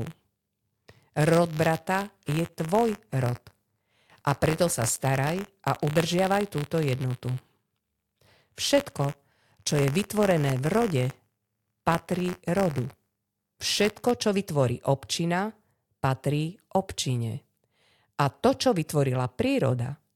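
From the start of the speech until about 14.11 s, just before "čo vytvorí občina patrí", the audio shows buffer tearing. The application writing into the playback ring buffer and the hardware reading from it have drifted out of step and cross within every period. A small slice of each buffer, around two percent, plays audio from roughly 20 ms earlier, with hard joins on either side. The result is a rattling, robotic buzz at 86.1 Hz, which fits a 512-sample buffer. It is present whenever there is signal.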